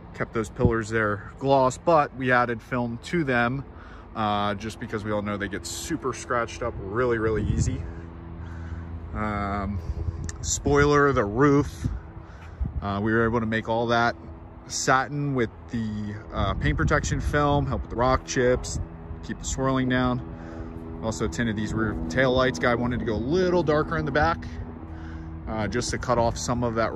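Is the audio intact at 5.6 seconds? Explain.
Yes, at 5.6 seconds the audio is intact, with no dropout, click, distortion or other technical fault at that moment.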